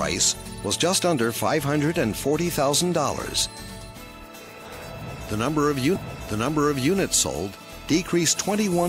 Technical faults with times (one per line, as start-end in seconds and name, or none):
5.95-6.95 stream segment repeated